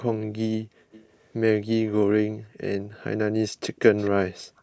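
From 0.91 to 1.3 s there's a faint delayed copy of the speech trailing about a quarter of a second (254 ms) behind, sitting roughly 25 dB down. That's echo leak: most likely the far end has the call on a loudspeaker, and its echo canceller let part of what its mic picked up slip back down the line. It returns as brief scraps at 3.76 to 3.8 s (very quiet, around 35 dB under), 3.97 to 4.1 s (the most noticeable, around 20 dB under), and 4.57 to 4.62 s (barely there, around 40 dB under). Each time the delay is the same 254 ms.

At 2.39 to 2.58 s the room tone suddenly drops away, by about 40 dB at its deepest, for around a fifth of a second before coming back. That's the background being gated by the echo canceller, which clamped the mic hard while the loudspeaker was playing. The same dip happens again from 4.43 s to the end of the clip, a bit shorter, and overlaps that last echo scrap. The band-limiting to 8 kHz from the call's mic processing is expected for a call and isn't a fault.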